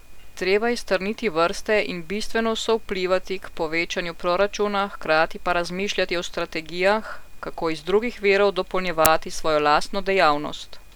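At 9.05 s, just after "kako iz drugih virov", an uninitialised buffer plays. Leftover memory, about 10 ms of it, is read as samples. The result is a short, loud crack.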